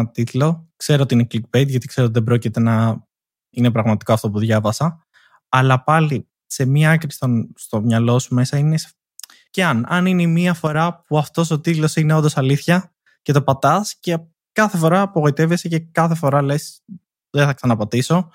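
At 10.67 to 10.75 s, just after "αν είναι η μία", and again at 17.52 to 17.65 s, the speech abruptly sinks by about 6 dB for a split second, then snaps back. This is likely one channel dropping out, halving the mono sum.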